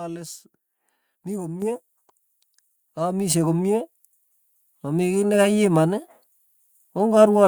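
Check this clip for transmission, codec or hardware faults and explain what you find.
One fault stands out in this speech clip: a microphone volume step-up at 1.62 s. At that instant the call software, judging the microphone too quiet, raised the device's input gain in a single jump of about 7 dB rather than ramping it gradually. Because the change happens before any processing separates voice from surroundings, the speech and the background noise floor both become abruptly louder together, producing an audible level jump mid-stream.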